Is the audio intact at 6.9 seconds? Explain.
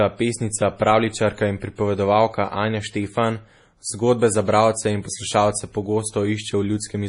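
No. At 6.9 s, as throughout, nothing remains above 10.6 kHz and the speech sounds watery, likely from MP3 compression at a bitrate around 32 kbps.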